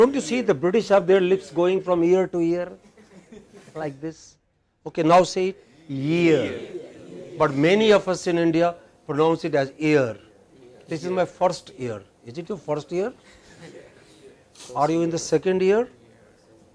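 No technical faults are audible.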